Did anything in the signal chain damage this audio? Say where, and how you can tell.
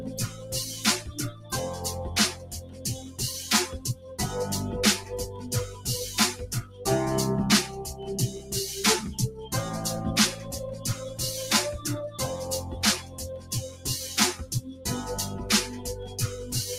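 Yes, in call processing. A noise suppressor built for speech was left running on this audio. It mistakes steady parts for noise, so the level pumps across a swing of around 10 dB.

There is also sound cut by the noise suppressor, where held and decaying parts sink by about 5 to 9 dB at 0.09–0.52, 1.01–1.52, 2.33–3.19, 5.01–5.86, 6.41–6.8, 10.35–10.85, 12.64–13.85 and 14.41–14.85 s.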